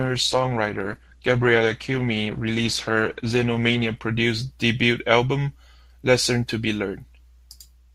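From 0.0 to 4.0 s the speech is affected by an adaptive stream starting at a low bitrate. The player began on a cheap version of the stream to start playback quickly. The sound fits Opus at around 16 kbit/s: nothing above 12.1 kHz and heavier codec artefacts. At 4.0 s, once the connection had been measured, quality jumps abruptly with no gap, consistent with a switch to roughly 64 kbit/s Opus.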